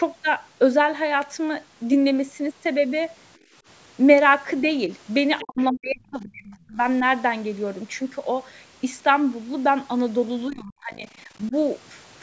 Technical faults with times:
3.38-3.55 background gated by the echo canceller
5.39-5.65 other side's voice leaking through
5.42-6.80 speech suppressed in double talk
10.48-11.06 speech suppressed in double talk
11.49-11.54 speech suppressed in double talk

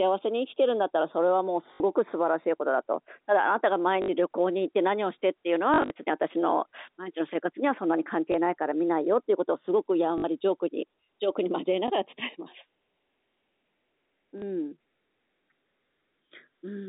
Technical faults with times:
0.00-16.88 channels drifting apart
1.75-1.80 packet loss with last packet repeated
4.02-4.08 packet loss with last packet repeated
5.74-5.90 packet loss with last packet repeated
8.32 packet loss with last packet repeated
10.18-10.24 packet loss with last packet repeated
11.88 packet loss with last packet repeated
14.38-14.42 packet loss with last packet repeated

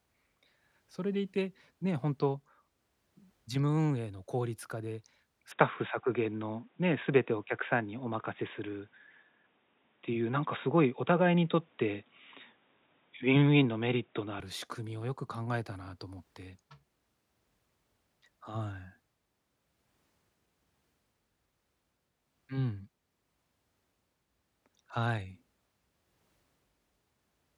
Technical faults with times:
5.52-14.40 input switched to a poorer device

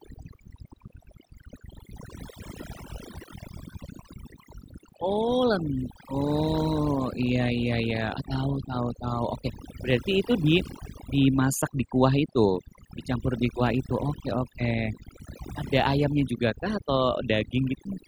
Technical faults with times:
0.00-18.07 overdone noise removal

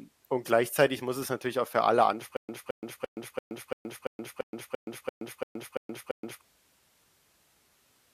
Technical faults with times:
2.37-6.41 stutter with silent gaps

